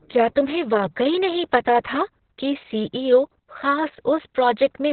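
Opus voice compression runs throughout: the SILK coder's narrowband, coarse coding leaves the speech muffled and hoarse, consistent with roughly 6 kbps, while a spectrogram shows nothing above 4.5 kHz.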